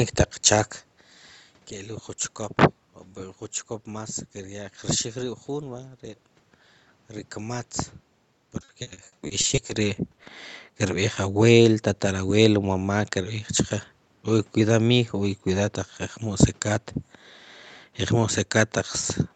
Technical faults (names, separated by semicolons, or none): repeated packet loss (robotic sound)